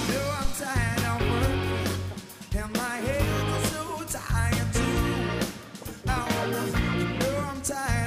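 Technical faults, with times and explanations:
0.45–0.57 s, phantom power thump: a deep, low-frequency thump peaking at about -14 dBFS and dying away over 28 ms. Switching the supply on a live input creates a sudden voltage step, which the coupling capacitors pass through as a brief bass pulse.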